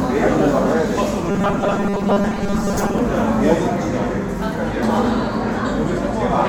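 A short recording of everyday sounds with robotic sound from repeated short buffers from 1.30 to 2.98 s. The audio turns into a rigid, metallic 200 Hz buzz for most of that stretch, likely because a chunk of about 5 ms kept being replayed while fresh audio failed to arrive.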